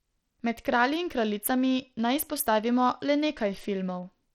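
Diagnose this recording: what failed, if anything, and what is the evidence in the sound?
Bluetooth SBC compression runs throughout the speech at the codec stage. The treble flickers and drops out, with plainly audible gritty noise and aliasing. A small bit pool, likely near 80 kbps, starves the upper sub-bands and coarsely quantises the rest.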